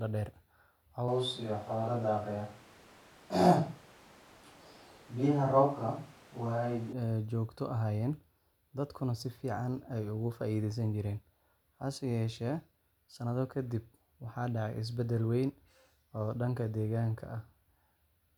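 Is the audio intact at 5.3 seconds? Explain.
No. At 5.3 seconds the speech sits inside a switch to a distant microphone that runs from about 1.08 s to 6.93 s. The close microphone's signal is likely missing for this stretch, leaving a pickup further from the talker. The sound turns roomy and hollow with thinner bass, and the level barely changes. Background noise rises to roughly 30 dB below the speech. Both transitions, in and out, are abrupt.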